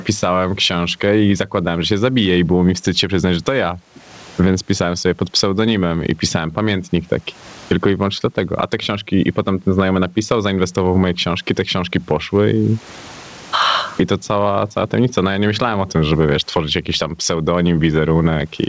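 Speech with gain pumping running through the whole recording: the gain swings by roughly 25 dB, which squashes loud and soft passages toward one level. The likely cause is microphone gain set far too high, with a fast limiter or compressor clamping down on each peak. On a waveform the envelope looks flattened. The room noise itself sits about 44 dB below the speech. The spectrogram also shows nothing above 8 kHz, which fits the G.722 call codec on the line.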